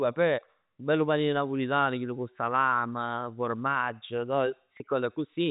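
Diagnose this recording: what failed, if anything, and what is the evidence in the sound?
It's network packet loss with pitch repetition at 4.77 to 4.80 s. A 30 ms gap was patched by looping the last pitch period, so the speech briefly holds with a buzz.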